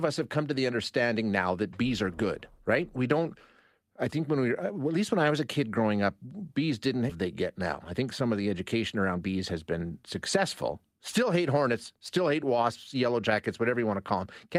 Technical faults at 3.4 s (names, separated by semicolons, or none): none